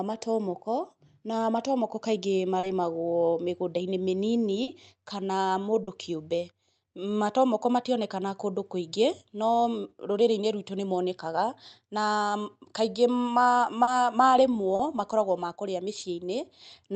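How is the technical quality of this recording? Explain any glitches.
The speech comes through a call codec, Opus by the sound of it, with nothing above about 8 kHz. The main issue is six short concealed packet loss glitches, at 2.59, 4.63, 5.83 (after "mĩnini kana"), 13.83 (just before "marĩmwo makoragwo makũrĩa"), 14.75 and 15.99 s (right after that same phrase). Each time about 40 ms of audio never arrived, so the receiver stretched the previous sound to cover the gap and you hear a brief smear or wobble.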